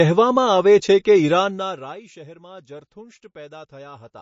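A speech recording that was most likely squeezed through low-bitrate MP3 compression, at a rate in the region of 33 kbps, so the encoder dropped everything above 7.6 kHz and let weak frequency lines flicker between frames, leaving the sound dull, watery and swirly, with smeared consonant attacks throughout. From 1.32 to 2.04 s a level drop of roughly 25 dB was applied in unsmoothed increments, about 70 a second, and each jump leaves a tiny click, so zipper noise rides over the sound as it fades.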